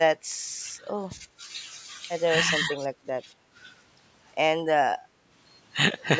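A speech recording made through call microphone processing, with nothing above 8 kHz. The speech is suppressed in double talk three times. It dips sharply at 0.13 to 0.21 s, by around 20 dB. It sinks more gently through 0.77 to 1.22 s, by around 10 dB. It ducks again at 3.17 to 3.25 s, by around 15 dB. The likely cause is the other side talking at the same moment. The echo canceller could not tell this talker from the loudspeaker echo, so it pulled everything down. At 5.0 to 5.13 s, the background is gated by the echo canceller. The room sound drops by about 7 dB for a brief moment. The canceller clamped the microphone while the loudspeaker played, then released it.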